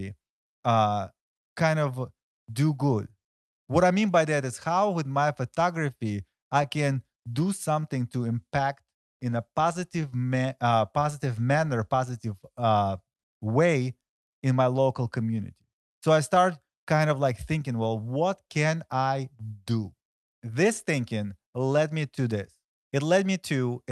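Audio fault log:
Throughout: clock drift between sender and receiver. The sending clock runs roughly 2 percent slow, so the receiver's buffer keeps draining and needs constant topping up. Unlike isolated packet loss, this steady one-directional mismatch produces hiccups spread unevenly across the entire speech clip.
0.34–23.85 s: repeated timing corrections. To keep pace with the slow sender, the receiver repeatedly stretches short pieces, playing the speech at about 98 percent speed and adding roughly 0.4 s overall. These edits all lengthen, never cut, giving a slightly dragging, unsteady tempo.
4.00–6.65 s: scattered short gaps. A few packets arrive late or go missing, and each tiny hole, only a few milliseconds, is bridged by continuing the last sound, about 20 ms concealed in all. These are brief local ticks or smears, not the clip-wide tempo drift.
13.13–13.18 s: short stall from a late packet. 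The buffer runs empty and the last sound is held for 29 ms until the packet arrives, then playback resumes where it stopped. It is a single held sound with a faint buzz or dip, not a scattered cluster.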